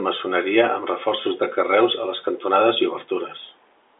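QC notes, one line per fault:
Nothing stood out on listening, with the audio carrying the narrow band of an ordinary telephone line coded as G.711 mu-law.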